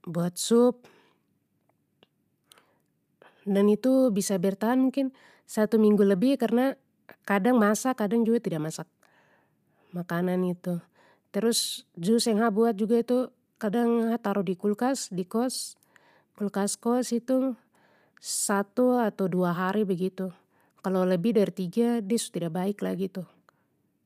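Nothing goes wrong anywhere in the speech here, and there's no technical fault to point to.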